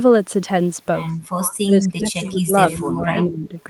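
From 1.65 to 3.08 s the speech dips, falling by as much as about 20 dB, then dips again less deeply from 3.25 to 3.54 s. This is likely speech suppressed in double talk, where an echo canceller turned down its own talker along with the loudspeaker echo.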